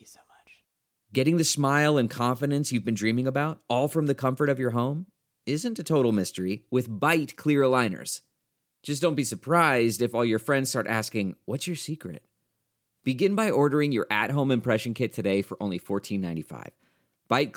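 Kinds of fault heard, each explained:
Nothing stood out on listening to this speech recording.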